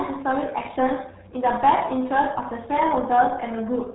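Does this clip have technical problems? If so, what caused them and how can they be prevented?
Yes. The speech runs through the RealAudio 14.4 codec from start to finish. It sounds muffled and gargly throughout. Nothing passes above about 3.9 kHz, so consonants lose their edge. The damage is heavy, which fits a bitrate near 8 kbit/s. At that rate the codec keeps only a coarse model of the voice. Fine detail smears into a watery, bubbling texture. To prevent it, encode with a modern codec at a higher bitrate from the original recording.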